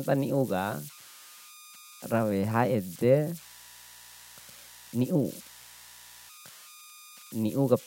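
Converter idle tones run through the whole of this speech recording, at about 22 dB below the signal. An undithered delta-sigma converter settles into repeating bit patterns on small inputs, producing a tone around 1 kHz in the pauses and grainy noise beneath quieter passages. Mains buzz enters from 3.27 to 6.30 s, a faint, steady, raspy buzz well below the speech. Sharp switching spikes from a dimmer, rectifier or missing shield arrive twice per 60 Hz cycle, spreading harmonics up into the kilohertz range.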